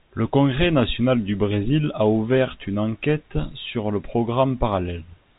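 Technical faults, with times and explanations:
No technical faults turn up in this speech; it comes through a normal call path, and the absence of anything above 4 kHz is just what you'd expect from a narrowband G.711 mu-law telephone codec.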